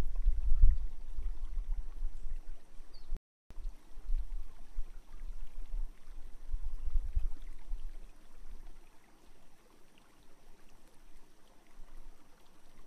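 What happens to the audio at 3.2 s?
The player likely ran out of data or had its thread blocked, causing a playback stall from 3.17 to 3.51 s. The output goes silent for about 340 ms, cutting the sound off mid-flow before it picks up again once playback recovers.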